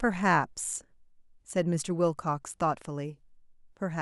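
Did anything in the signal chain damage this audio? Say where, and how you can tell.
No, nothing along the chain seems to have damaged this speech recording, so there's no stage to point to and nothing to diagnose.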